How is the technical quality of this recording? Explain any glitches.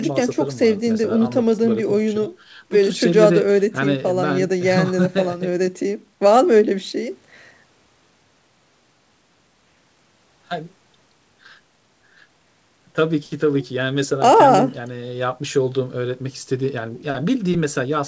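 No glitches can be heard in this recording; the signal shows only the ordinary character of a wideband call link, with the lowest bass trimmed by the microphone processing and nothing above 8 kHz, which fits a codec such as G.722.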